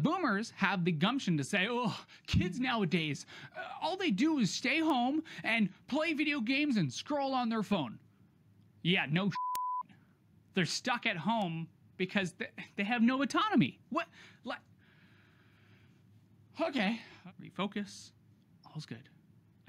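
From 0.24 s to 18.87 s, word clock ticks recur about once a second, roughly twenty in all. The receiving clock isn't locked to the source, and at roughly 20 ppm drift each slip drops or repeats a single sample, producing short, sharp clicks.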